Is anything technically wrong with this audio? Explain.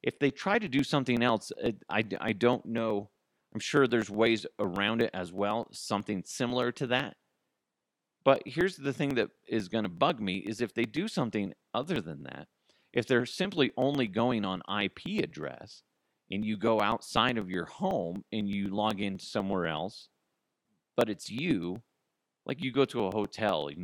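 Yes. From 0.17 to 23.74 s, periodic USB or driver dropouts skip about a millisecond every 0.124 s, producing steady ticks through the speech.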